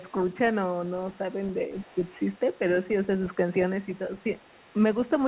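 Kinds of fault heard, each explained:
Speech suppressed in double talk: the talker's level dips by up to about 10 dB in three brief spots, likely an echo canceller turning down overlapping speech.
Other side's voice leaking through: a faint second voice, about 30 dB under the talker, runs almost throughout, likely loudspeaker echo the canceller left in the microphone signal.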